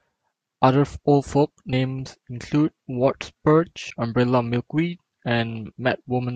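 At 1.73 s and again at 3.9 s the speech jumps forward: compressed frames skipped, around 40 ms of audio lost at the first and roughly 70 ms at the second, which points to several whole frames each time. The decoder simply never played that stretch. Unlike a dropout, there is no gap of silence.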